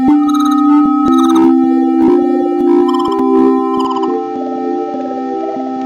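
At 3.85 s the sound abruptly turns duller and slightly quieter, losing everything above 7.6 kHz with no gap, and a new noise floor appears well beneath it through to the end. The likely cause is an input switched to a poorer device mid-recording.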